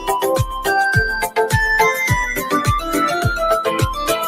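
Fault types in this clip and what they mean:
Noise suppressor applied to music or sounds: a speech-tuned suppressor treats sustained content as noise, so level swings roughly 10 dB; the waveform pumps, and spectrogram tails fade early.
Sound cut by the noise suppressor: from 2.38 to 2.53 s one passage is pulled down by about 8 dB, showing as a brief dip in the waveform envelope and a dimmed spectrogram band.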